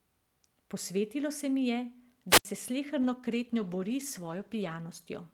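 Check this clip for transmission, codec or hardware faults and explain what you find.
Two faults are present: a wireless microphone squelch dropout and a call bitrate drop.

From 2.29 to 2.45 s, just after "se mi je", there is a wireless microphone squelch dropout. The analogue FM radio link weakened, hiss rose, and the receiver's squelch shut the output for about 75 ms before the voice came back. Unlike a packet-loss gap, which cuts cleanly or is smoothed over by concealment, this gap is preceded by a swell of static before the near silence.

From 3.07 to 4.99 s the speech turns rough and watery and loses its top end. This is a call bitrate drop. The connection's bandwidth estimate fell, and the encoder was forced to code with far fewer bits. The sound fits a fall from 64 to 16 kbps, held at its lowest for 1.82 s. Unlike a dropout, nothing goes missing. The speech stays continuous and only its detail coarsens until the bitrate recovers.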